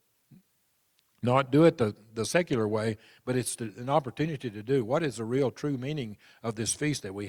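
A speech clip with one drift correction step. From 0.49 s to 1.47 s, playback runs about 6.4 percent slow and the pitch drops by roughly 114 cents, a little over a semitone, so the voice sounds briefly detuned and dragged before snapping back to normal just ahead of "do it the the". Speed and pitch move together, which points to a likely clock-matching resampler changing its rate in one step to manage its buffer.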